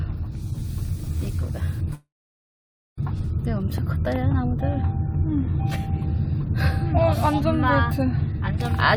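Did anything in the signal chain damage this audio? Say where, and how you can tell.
Yes, a long network dropout: from 1.93 to 2.99 s about a second is missing, a brief fading tail, then 0.9 s of silence, likely packet loss.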